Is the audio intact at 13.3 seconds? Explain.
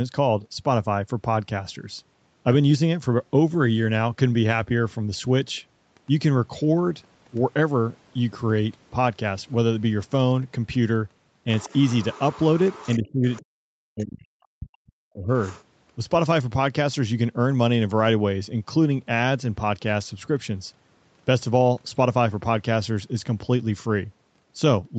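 No. Speech suppressed in double talk runs from 12.98 to 14.26 s. The speech dips by up to about 40 dB, in pieces adding up to around a second, likely because the echo canceller couldn't separate the talker from loudspeaker echo and turned both down. The other side's voice leaks through from 13.31 to 13.41 s as a brief scrap about 25 dB below the speech, likely residual loudspeaker echo that the canceller left in the microphone signal.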